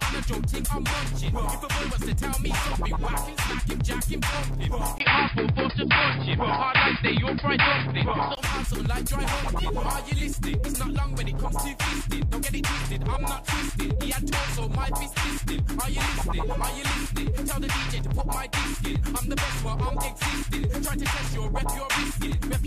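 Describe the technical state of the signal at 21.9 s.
At 21.9 s the signal is intact, with no dropout, distortion, glitch or other technical fault audible.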